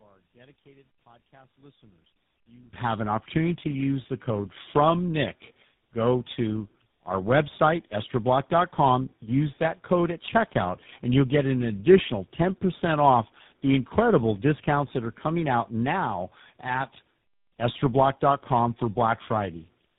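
One channel inverted, from 0 to 2.73 s: for the first stretch of this speech clip the level falls by about 30 dB and the voice nearly disappears, leaving only a faint residue. The likely cause is reversed polarity on one stereo channel. When the two channels are summed to mono, the centred voice common to both cancels, and only the small difference between them remains. Tandem speech coding, present throughout the clip: the voice sounds rough, muffled and warbly, with nothing above 3.8 kHz. This fits a chain of three speech coders in a row, ending in something like GSM full rate, with plain telephone-grade links between them. At each border the signal was decoded and coded again, so every coder worked on the already degraded output of the one before, and the damage compounded.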